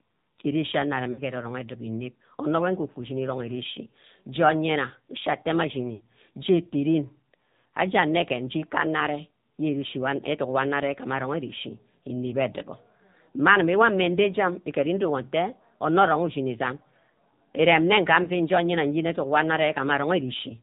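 The whole clip runs through the AMR narrowband mobile codec. Nothing gets past 4 kHz, and the speech has that buzzy, synthetic edge that fits a low mode around 7.4 kbps. At 1.12 to 1.23 s and again at 5.94 to 6.03 s there are lost AMR speech frames. The decoder stretches the last sound and lets it fade for roughly 60 ms, which points to three dropped frames each time. A shorter dip follows at 18.24 to 18.29 s, about one frame's worth.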